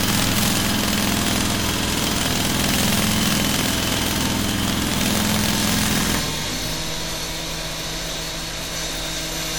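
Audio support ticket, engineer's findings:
Integer overflow, throughout: loud peaks crack violently rather than flatten. Gain stage or summing bus pushes about 6 dB past full scale, and peaks wrap to the opposite rail. Waveform shows vertical full-range jumps on about 0.7% of samples, not flat tops.

Low-bitrate audio saved at a high bitrate, throughout: leftover artefacts from an earlier low-rate encoding that a high-rate MP3 would not produce. The likely cause is a low-rate WMA source, around 48 kbit/s, re-encoded to high-rate MP3. Spectrogram shows content reaching about 20.1 kHz and nothing above.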